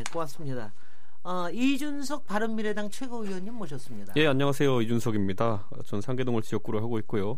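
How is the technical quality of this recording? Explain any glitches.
The one real problem here is a DC offset running the whole length of this speech clip. The waveform sits shifted off zero by about -26 dBFS, so you won't hear it, but it eats headroom and leaves a steady lump of energy right at the bottom of the spectrum.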